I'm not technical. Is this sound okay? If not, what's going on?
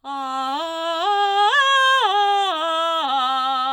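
Yes, this music comes through without any technical problems that a listener would notice.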